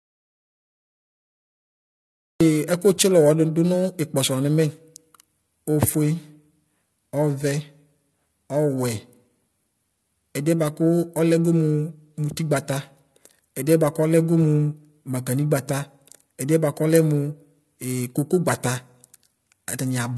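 From the very start until 2.4 s the recording is already in an audio dropout to silence. There is pure silence with no room tone or hiss, so the input was likely lost while the recorder kept writing empty samples. That absence of any background noise is what separates it from a quiet passage or a gated pause. The speech simply begins mid-flow when the signal returns.

Throughout the speech, MP3 compression damage is plainly audible. Nothing reaches above 10.5 kHz, where the encoder has cut the top off, and the sibilants carry a watery, swirling chirp as weak frequency lines flicker on and off between frames. Consonant attacks sound smeared. The hard treble ceiling combined with that frame-to-frame flutter fits a low bitrate of around 40 kbps. Those two traits set it apart from a plain low-pass filter, which would dull the sound without the swirl.

Periodic clock jitter runs through the whole clip as well, with the converter clock wobbling at around 1 kHz. 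Every component of the speech picks up sidebands spaced about that far above and below it, and they grow stronger on the brighter, higher parts. The result is a rough, metallic edge that disappears completely in the silent opening. Broadband hiss or hum would persist there, which is how this differs from added noise.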